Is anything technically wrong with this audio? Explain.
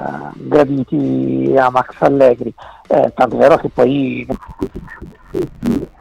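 Yes. From 4.32 s to the end, interleaved audio is read as planar: blocks of 10.88 ms are de-interleaved wrongly, giving a dull, robotic sound buzzing at about 92 Hz.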